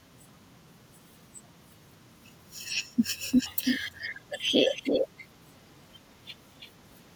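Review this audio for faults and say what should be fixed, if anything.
Three bursts of echo leak are audible, from 3.31 to 4.25 s, 4.64 to 5.28 s and 6.43 to 6.71 s. Each is a delayed copy of the speech trailing it by 327 ms. The copy sits around 10 dB under the speech in the first burst, only about 5 dB under in the second, and is faint in the third. This is likely a far-end loudspeaker feeding a microphone whose echo canceller failed to subtract it. Room reverberation would smear continuously, but this is a distinct repeat at a fixed lag that comes and goes. Fix it by improving echo cancellation at the loudspeaker end or switching that side to a headset.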